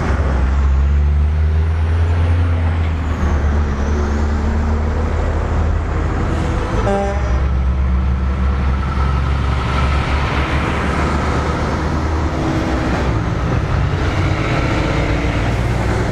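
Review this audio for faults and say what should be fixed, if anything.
Nothing here needs fixing; I didn't hear any faults anywhere in the audio, so it can stay as it is.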